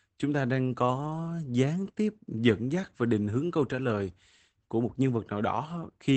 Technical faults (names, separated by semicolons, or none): Opus voice compression